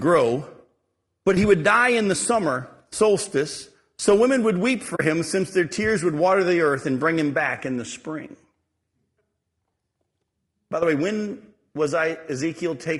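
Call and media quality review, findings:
Low-delay AAC compression across the whole clip, plainly audible. Speech rough and grainy, noise filling gaps between harmonics, top band dull or synthetic. Likely AAC-ELD near 32 kbps. Short frames resolve pitch poorly and starve the bit budget.

AAC frame loss with muting at 4.95 to 5.0 s, between "so women would weep" and "him since their tears". Soft-edged gap, about 40 ms. Two frames lost, spectrum zeroed; overlapping windows fade out and back in.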